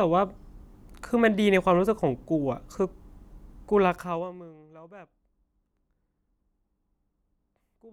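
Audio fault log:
3.85–4.53 s, zipper noise: a rapid ticking, zipping buzz rides on the speech while its level falls by roughly 25 dB. The gain drops in coarse, unsmoothed steps, around 70 per second, and each abrupt jump leaves a tiny click in the waveform.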